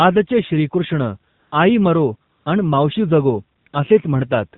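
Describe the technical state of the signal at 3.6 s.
At 3.6 s the real background drops out and a smooth, steady hiss takes its place. It lasts from 3.58 to 3.66 s, stops briefly, and returns from 3.68 to 3.74 s. This is AMR comfort noise. The sending phone judged the talker silent and stopped transmitting speech frames for about 80 ms and then 60 ms, so the receiver filled each gap with synthetic noise built from a rough estimate of the level and spectral shape. That switching is what makes the texture change so abruptly.

Underneath, the whole moment carries the sound of the AMR narrowband mobile codec. It is band-limited to nothing above 4 kHz, and the voice comes through plainly buzzy and synthetic. The coder rebuilds the voice from a vocal-tract model driven by a few pulses in each 5 ms subframe, and the strength of the damage fits one of its lower modes, around 7.4 kbps, where too few bits remain to describe the waveform faithfully.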